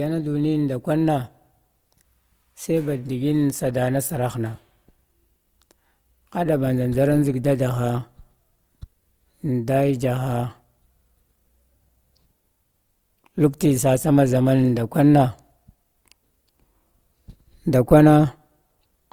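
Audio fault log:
Throughout, Opus compression: the speech sounds plainly grainy and rough, likely from Opus music-mode coding at a rate consistent with 24 kbps. Band energies survive, but fine detail is rebuilt from folded or noise-like content. Bandwidth still extends to 20.2 kHz.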